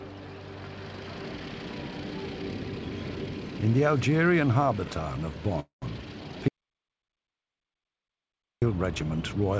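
At 5.60 s, packets were likely held up in transit and the jitter buffer ran dry, producing a call audio freeze that lasts until 5.84 s. The receiver fills about 220 ms by stretching the last sound into a brief fading buzz or hiss, which decays into roughly 120 ms of silence before the stream resumes exactly where it stopped. Nothing is lost, but everything after it now arrives about 220 ms later.

At 6.48 s the input was likely cut off, perhaps by a disconnected device or a stray mute, while the recorder kept writing silence. The result is an audio dropout to silence running to 8.62 s. The sound stops abruptly and comes back mid-flow, and the gap of about 2.1 s is silent with no room tone. Whatever happened in that stretch is gone. Around both faults, the call path's G.722 coding leaves nothing above 8 kHz.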